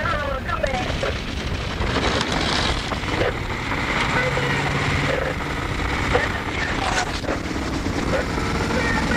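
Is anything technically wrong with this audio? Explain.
Yes, there is a call bitrate drop from 6.54 to 8.14 s. The encoder was starved of bits, which fits a fall from around 64 to 12 kbps, so the sound turns coarse, watery and dull.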